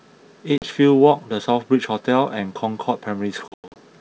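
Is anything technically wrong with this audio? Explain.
Yes, there's packet loss on an ADPCM call here. Around 0.58 to 0.68 s, about 40 ms drops out, roughly a couple of packets. Then from 3.48 to 3.80 s, about 200 ms of sound goes missing in scattered holes, the longest run being 100 ms. Each gap is hard-edged silence, and since the decoder's predictor and step size lose sync with the sender, the speech comes back with brief, slight distortion.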